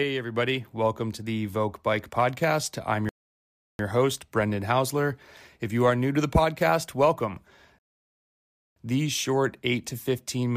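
Rebuffering stalls interrupt this speech clip at 3.09 to 3.79 s and 7.79 to 8.76 s. The player ran dry of downloaded audio and went silent for 0.70 s and then 0.98 s. Playback then picks up exactly where it halted, so nothing is skipped, only delayed.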